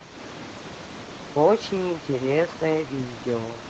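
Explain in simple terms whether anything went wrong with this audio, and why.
A call bitrate drop runs from 0.51 s to 2.61 s, at its worst for about 1.4 s. The call's connection estimate fell, so the encoder had far fewer bits to describe the speech. It coded more coarsely, making the voice sound rougher and more watery until the rate recovered.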